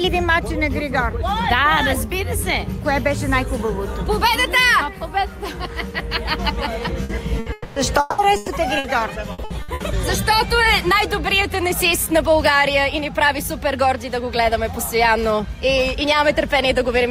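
Between 7 and 10 s the audio breaks up in three related ways. Short bursts of packet loss at 7.03, 7.39, 8.36 and 8.78 s each replace 60 to 120 ms with a continuation of the preceding sound that fades before the audio picks up later, so each one is a brief smeared blip rather than a silence. At 7.52 to 7.79 s and 8.00 to 8.21 s the stretched, fading fill lasts 240 and 180 ms and never falls to silence. These longer gaps are the clearest sign of a likely long network dropout, where a stretch of stream simply failed to arrive. From 9.32 to 9.83 s repeated packet loss gives a choppy, robotic sound: four holes of up to 60 ms follow one another closely, and patching covers nearly half that half-second. It is the rapid recurrence, not the length of any single gap, that separates it from the isolated bursts.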